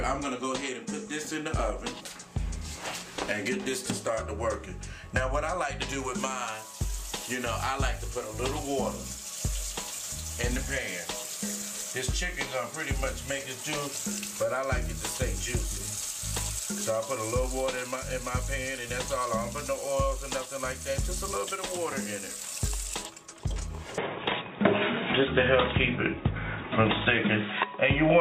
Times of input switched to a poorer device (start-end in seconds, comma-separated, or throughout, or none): 23.98-28.21